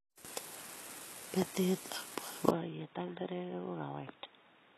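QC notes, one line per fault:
throughout: HE-AAC compression, likely; treble above 12.3 kHz is gone and the top sounds rebuilt, gritty and lispy on s sounds, fitting roughly 16 kbps, unlike a steady plain low-pass.
2.50–4.78 s: input switched to a poorer device, likely; sound abruptly dulls to nothing above 3.8 kHz, drops about 10 dB, gains faint new hiss, with no gap at the switch.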